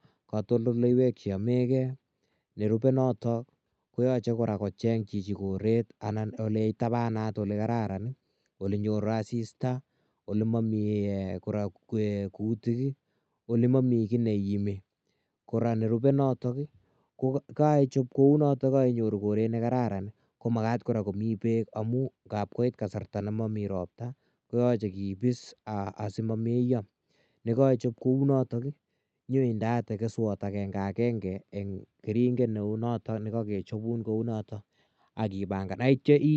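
Nothing goes wrong anywhere in this recording; the speech just comes over an ordinary call link, with the top end rolling off around 8 kHz the way a wideband Opus connection would.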